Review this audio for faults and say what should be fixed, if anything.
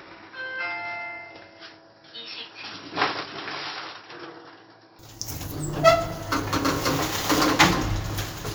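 From 0.0 to 4.99 s the everyday sound is dull and boxy, with nothing above 5.6 kHz and a faint new noise floor about 45 dB down. It then clears abruptly with no gap or level jump, likely an input switched to a poorer device. The changed tone and noise floor set it apart from a plain low-pass filter. To prevent it, lock the recording input to one device so the system cannot change it mid-take.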